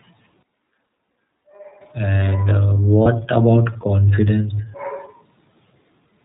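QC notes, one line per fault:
throughout: iLBC codec. The speech has plainly audible narrowband coding damage, a slightly rough, synthetic edge. It fits the 13.33 kbps mode with 30 ms frames. A spectrogram shows an empty band above 4 kHz and a blocky, frame-rate texture in the harmonics.
0.43–1.81 s: switch to a distant microphone. The sound turns abruptly roomy and hollow, with thinner bass and a drop of about 10 dB, and room noise appears at roughly 30 dB below the speech. This is likely a lost close-mic feed. On the waveform the envelope drops and the gaps fill with noise, both with hard edges.
0.83–0.86 s, 3.02–3.06 s, 4.56–4.59 s: lost iLBC frames. Each gap of about 30 ms, which fits a single lost frame, is filled by the decoder repeating the last pitch cycle with added noise, so it sounds like a brief buzzy held vowel. Because iLBC frames stand alone, the speech recovers immediately afterwards. 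A spectrogram shows short, smeared, flat harmonic patches.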